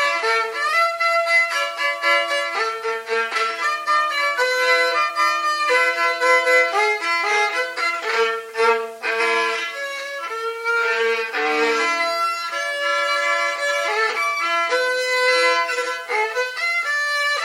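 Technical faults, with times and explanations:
0.68 s and 5.09 s, damaged data in a compressed stream: at each point a short stretch of the encoded file arrives corrupted, so the decoder cannot read those frames correctly, loses its place in the stream and has to hunt for the next valid frame header before normal decoding resumes. Each event lasts only about 14 ms and is heard as a brief glitch.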